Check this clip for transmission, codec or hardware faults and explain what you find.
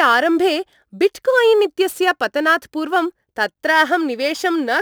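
There is one fault, crude rate conversion, and it runs through the whole of the speech. A gritty, inharmonic fizz rides on the louder and brighter parts of the speech, with tones that don't belong to the speech. It sits roughly 25 dB below the speech. The cause is a sample-rate change done by simply picking the nearest sample, with no filtering. The pattern fits a conversion from 48 kHz to 44.1 kHz. Samples are skipped in a pattern that repeats every 160 input samples, and that regular timing error creates the unrelated tones.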